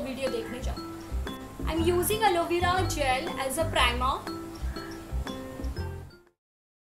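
There are no technical faults to describe in time order; the smooth fade-out that begins around 5.5 s and ends at 6.41 s is an ordinary edit.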